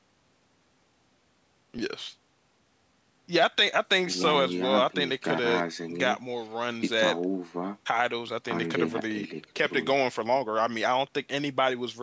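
The speech contains no audible technical faults.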